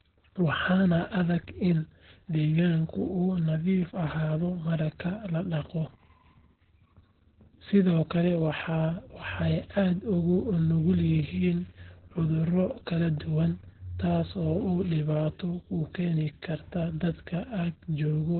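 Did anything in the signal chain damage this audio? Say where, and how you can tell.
Yes. Opus voice compression at the codec stage, throughout the clip: nothing is present above 4.3 kHz, and the speech sounds muffled, hoarse and slightly robotic. That points to narrowband SILK at a bitrate near 8 kbps, where the excitation is coded very coarsely.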